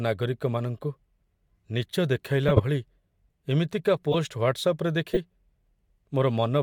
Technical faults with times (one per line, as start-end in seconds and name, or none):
2.48-2.61 corrupt frame decoded
4.12-4.16 corrupt frame decoded
5.13-5.17 corrupt frame decoded